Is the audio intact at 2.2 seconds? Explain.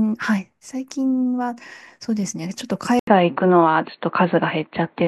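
Yes, the audio is intact at 2.2 seconds, with no dropout, glitch or other fault at that point in the speech.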